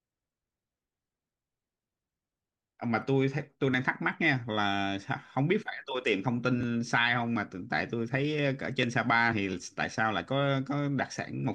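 Speech with compressed frames skipped: at 6.60 s and from 9.31 to 9.33 s the decoder drops a single 23.2 ms frame, so about 20 ms of audio vanishes.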